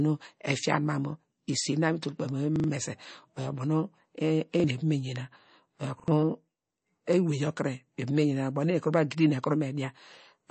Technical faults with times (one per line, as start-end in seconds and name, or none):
0.00-10.50 MP3 compression
2.56-2.68 repeated buffer
4.60-4.64 repeated buffer
6.00-6.08 repeated buffer